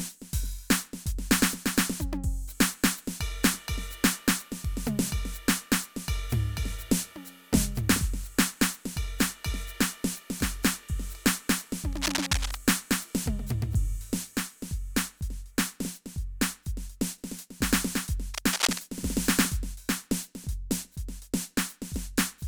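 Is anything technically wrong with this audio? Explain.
Yes. From 11.93 to 12.62 s and 18.34 to 18.81 s there is cable scratch noise, likely a worn connector or cable shifting so its contact resistance fluctuates. Dense, ragged scratching sits over the music, first slightly below it, then about as loud.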